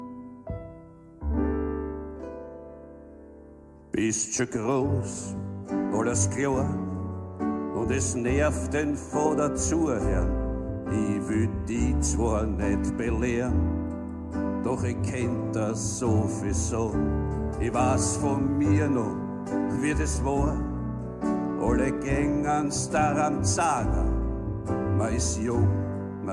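No technical faults are audible.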